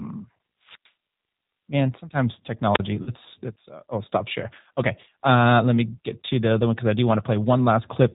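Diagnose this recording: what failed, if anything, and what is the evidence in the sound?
The codec stage is the weak point: the call went through a G.729 codec, and the damage is plainly audible. It rebuilds speech from a vocal tract filter, a pitch predictor and a handful of pulses per short frame, which fits an 8 kbit/s narrowband link. Throughout the clip nothing reaches above 4 kHz, so the speech sounds dull, and it has a rough, slightly synthetic edge where the pulse model only approximates the real excitation.

The network dropped audio, which the speech decoder then covered with packet loss concealment. From 3.03 to 3.12 s, just before "let's uh oh stop", about 40 ms of speech is missing, which fits two lost 20 ms packets. To fill the gap, the decoder repeated its last pitch and filter at falling gain, so the sound smears into a buzzy tone or coloured noise that fades. Because each frame builds on the previous one, the speech stays weak or distorted for a short while after packets resume.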